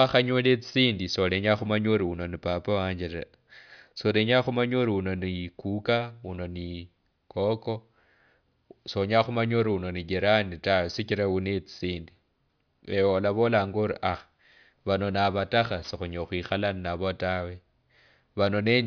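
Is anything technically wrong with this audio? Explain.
No, nothing is technically wrong with this audio.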